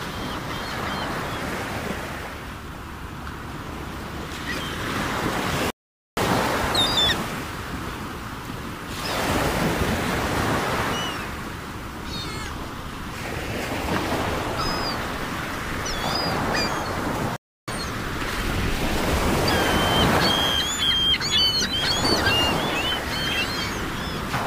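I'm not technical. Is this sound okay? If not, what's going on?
No. The sound cuts to silence at 5.70 s for about half a second and at 17.36 s for about a third, then resumes. That's a playback stall, likely the player briefly running out of data.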